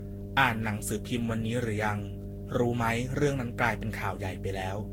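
Mains hum runs through the whole of this speech recording: a steady 50 Hz tone with low harmonics, sitting only around 10 dB below the speech. It sounds like a ground loop or nearby transformer leaking the power line into the signal chain. Generation loss is also present from start to finish. The speech sounds swirly, smeared and hollow, consonant attacks blur, and nothing remains above 16.7 kHz. The likely cause is repeated lossy re-encoding, roughly seven passes at around 60 kbit/s in a Vorbis-like codec, each pass requantising on a fresh frame grid so the noise and spectral holes accumulate.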